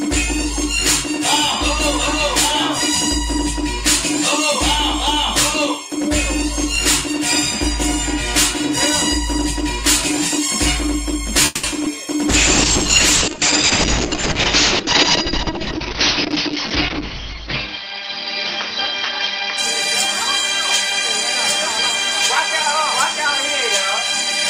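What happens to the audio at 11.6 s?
At 11.6 s the sound is in a call audio freeze, running from 11.45 to 11.65 s. The last sound stretches into a brief buzzy continuation that fades, filling about 180 ms. The likely cause is packets delayed in transit, so the jitter buffer ran dry and the receiver improvised. When playback resumes, it picks up exactly where it stopped. Nothing is lost. Everything after this point simply arrives about 180 ms later.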